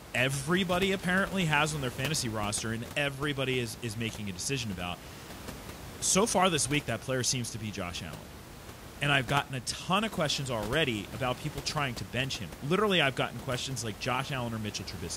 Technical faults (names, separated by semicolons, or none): none